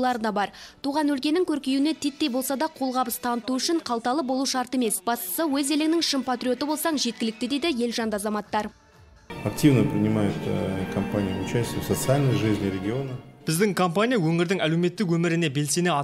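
No technical faults can be heard anywhere in the audio.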